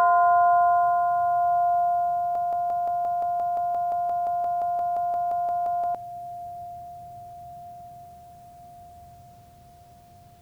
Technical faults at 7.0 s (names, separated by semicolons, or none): none